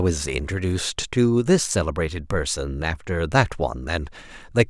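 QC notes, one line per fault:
No faults found. Nothing in the speech calls for a QC entry.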